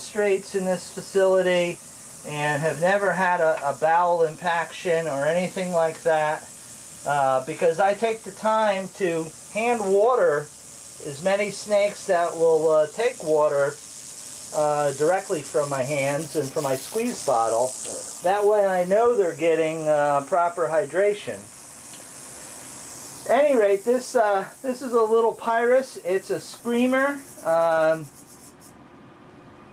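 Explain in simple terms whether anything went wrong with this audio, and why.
Nothing went wrong with this audio, so there is nothing to explain.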